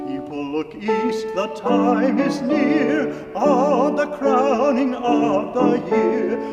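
There are no technical faults to describe in this clip.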